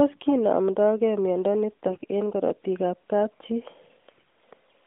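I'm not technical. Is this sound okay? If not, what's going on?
No. Twice the speech turns briefly hoarse and scratchy, almost gargly. These are AMR bit errors. The call went over a weak mobile link, and some fine detail in the digital speech data arrived garbled. The phone still rebuilt the sound, but from wrong pieces. The first burst runs from 1.88 to 2.06 s, just before "eng' karatik ab kapchii". The second, milder one runs from 4.09 to 4.23 s, just after those same words.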